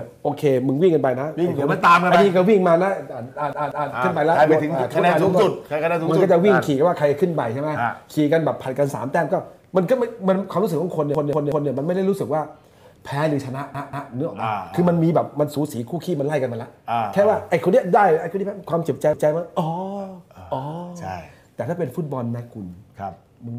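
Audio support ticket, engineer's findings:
Repeated buffer stutters at 3.53, 11.15, 13.75 and 19.13 s. A 186 ms chunk replays one to three times with hard joins, which fits an 8192-sample output buffer underrunning.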